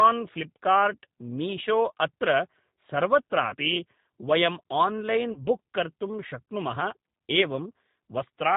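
Throughout the speech the G.729 codec is plainly audible. The sound is band-limited and faintly rough and synthetic, which fits an 8 kbit/s G.729A stream. The decoder rebuilds each 10 ms frame from a vocal-tract filter, a pitch predictor and a few sparse pulses, so fine detail is lost. On a spectrogram the energy stops sharply at 4 kHz, and the harmonics look smeared and grainy rather than crisp.

From 3.50 to 3.55 s comes the first VoIP packet loss concealed by the speech codec. About 20 ms of audio went missing, which fits a single lost packet. The decoder filled the hole by repeating its last pitch and filter settings at falling gain, giving a brief stretched, fading smear.

The second loss, from 5.32 to 5.40 s, covers about 40 ms and sounds like a longer stretch of sound that fades. On a waveform both spots show a sagging, overly regular stretch, and the spectrogram shows flat, repeated harmonic bands that dim before normal detail returns.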